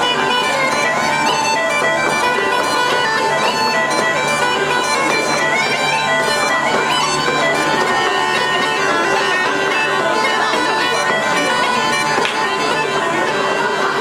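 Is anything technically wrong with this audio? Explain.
No, nothing stood out as technically wrong on listening.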